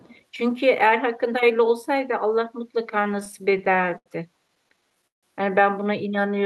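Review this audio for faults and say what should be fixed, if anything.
From 0.0 to 0.2 s, a faint delayed copy trails the speech by about 485 ms, roughly 30 dB below it. This is an echo leak, likely from a far-end loudspeaker that the echo canceller did not fully suppress. It is a distinct repeat, unlike reverberation's smooth decay. Better echo cancellation or a headset at the far end would prevent it.

From 3.13 to 4.08 s and again from 4.48 to 5.25 s, the speech catches and drags in repeated stalls (stutter). The jitter buffer kept running dry, so the last sound was held until data arrived, with the longest holds around 79 ms and 156 ms. Unlike packet loss, nothing is dropped; the audio is only stretched. A larger adaptive jitter buffer would prevent it.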